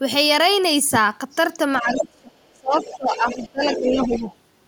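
An echo canceller that likely let part of the loudspeaker signal back into the microphone causes the first fault: from 1.77 to 2.04 s, the other side's voice leaks through at nearly the talker's own level, about 5 dB below it. Almost immediately, at 1.82 s, speech is suppressed in double talk. With both sides active, the canceller likely could not separate the two and turned everything down. Until 2.78 s the talker's voice sinks sharply, by roughly 35 dB at its deepest, for about 0.7 s in all.

The leak returns from 2.78 to 3.49 s, this time faint, about 20 dB under the speech. It likely comes from the same incomplete echo removal. From 2.97 to 4.25 s a second suppression dips the talker by around 20 dB, for about a second in total. This one is likely a further double-talk clamp. Inside that stretch, from 3.69 to 4.25 s, the far-end voice leaks through once more at about 10 dB below the speech, likely the same residual echo, so the two voices are heard overlapping.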